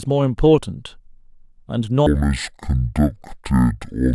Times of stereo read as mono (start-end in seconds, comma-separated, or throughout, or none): 2.06-4.14